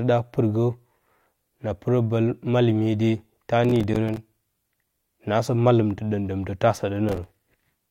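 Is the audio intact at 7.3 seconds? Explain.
No, 7.3 s sits inside a burst of processor overload crackle from 7.09 to 7.40 s, where roughly ten short buffers missed their deadlines and dropped to silence, leaving gritty crackle.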